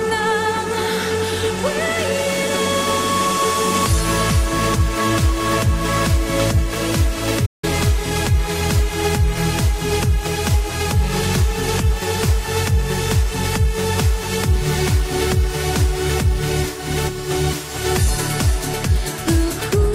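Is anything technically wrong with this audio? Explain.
Yes. At 7.45 s the sound cuts off abruptly in mid-flow, a playback stall lasting 170 ms until 7.64 s, before it carries on. The player likely ran out of data or had its thread blocked. The waveform shows a flat gap, and the spectrogram shows an empty vertical band.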